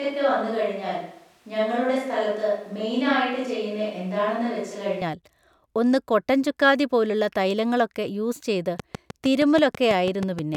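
The close microphone's feed has likely dropped out from the very start of this speech recording, leaving a more distant microphone in use until 5.02 s. This switch to a distant microphone makes the voice roomy, hollow and thin in the bass, about 5 dB quieter, with room noise roughly 35 dB below the speech. From 8.80 s to 10.56 s, likely interference or a faulty connection injects a train of clicks, about ten regular ticks at 6.28 per second, peaking around 10 dB above the audio and audible in the pauses too.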